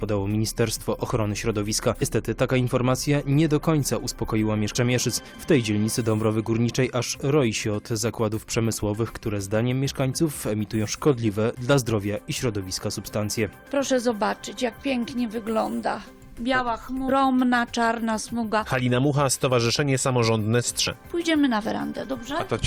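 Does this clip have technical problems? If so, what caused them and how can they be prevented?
Yes. Damaged data in a compressed stream shows up as five short blips, at 2.01 s, 4.75 s, 10.83 to 10.85 s, 17.08 to 17.10 s and 20.86 s, each about 20 ms long. At those points, corrupted bytes in the encoded file make the decoder misread a frame and lose sync until it finds the next valid frame header. Protecting storage and transfer with checksums, and sending the stream over an error-checked transport, prevents this.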